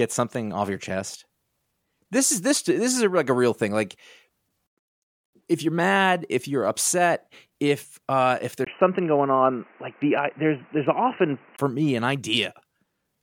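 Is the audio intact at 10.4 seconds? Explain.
No. From 8.65 to 11.59 s, after "upset if uh if" and before "me an", the input likely switched to a poorer device. The speech turns dull and boxy, with new background noise about 35 dB down and no level change. A spectrogram shows everything above 3 kHz sharply cut away, and the waveform has a 20 ms gap at the switch.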